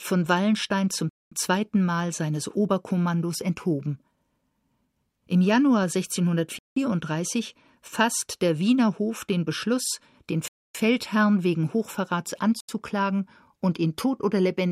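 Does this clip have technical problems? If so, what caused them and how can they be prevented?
Yes. The speech drops to dead silence four times, at 1.09–1.32 s, 6.59–6.76 s, 10.48–10.75 s and 12.60–12.69 s, for 0.08 to 0.27 s each, then resumes. This is likely a Bluetooth stall: interference delayed packets, the headphones' buffer emptied, and playback waited for resends. Keeping the phone close to the headphones, with nothing between them, and away from crowded 2.4 GHz sources prevents it.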